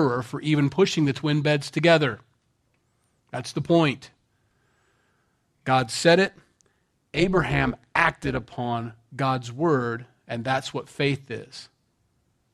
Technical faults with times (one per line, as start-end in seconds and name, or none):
6.26-8.58 overlap-add ripple